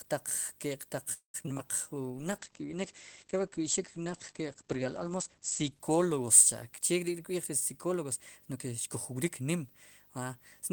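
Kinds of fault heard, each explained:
Video or display buzz: a 50 Hz field-rate buzz with hash and a faint 15.6 kHz line tone runs throughout, about 30 dB down; that high whine separates it from plain mains hum.
Call audio freeze: from 1.13 to 1.36 s the sound is held, fades, then sits silent about 0.12 s, likely a starved jitter buffer; speech resumes intact, unlike packet loss.
Repeated packet loss (robotic sound): from 1.42 to 1.60 s four short holes, longest 19 ms, leave choppy sound with about 81 ms genuinely missing, not merely delayed.
Jitter buffer slow-down: from 1.89 to 2.06 s the audio stretches to 84% speed at unchanged pitch, adding 36 ms; timing drags while tone stays clean, unlike a bitrate drop.
Call bitrate drop: from 2.12 to 7.60 s the coding falls from 32 to 12 kbps, band limit 20 kHz to 8 kHz, giving muffled, watery sound rather than timing changes.
Jitter buffer speed-up: from 8.53 to 9.64 s the audio runs at 107% speed, roughly 0.1 s trimmed, sounding hurried while pitch stays put, unlike a faster tape.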